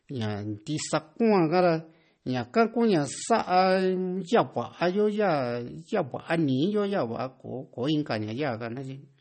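From start to finish the speech carries plainly audible MP3 compression damage. Nothing comes through above about 8.4 kHz, so the top end is sliced off flat, and the s sounds go swirly and a bit metallic as faint detail flickers in and out between frames. Attacks smear too. That's the sound of an encoder starved for bits and throwing away what its hearing model rates as least important, likely from a low bitrate around 32 kbps.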